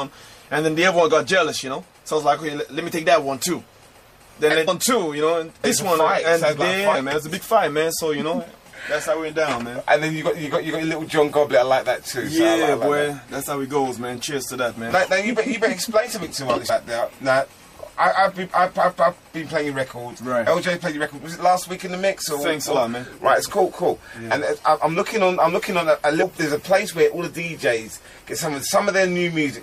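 Throughout, the audio has likely been through MP3 compression at a bitrate that points to about 64 kbps. Starved of bits, the encoder chops off the treble and lets weak frequency lines drop in and out between frames, so the damage is plainly audible: the sound turns watery and swirly, bright sibilant or cymbal-like content chirps metallically, and sharp onsets lose their edge and smear.

On top of that, whole compressed frames go missing in playback, because they are absent from the file or were rejected as damaged. Each time, the audio leaps forward by a multiple of the 26.1 ms frame length. At 4.67 s about 300 ms vanishes, at 5.63 s roughly 150 ms, at 6.94 s around 70 ms, at 16.68 s about 150 ms, and at 26.22 s roughly 70 ms. The overlapping frames blur each join into a short smeared blip rather than a click.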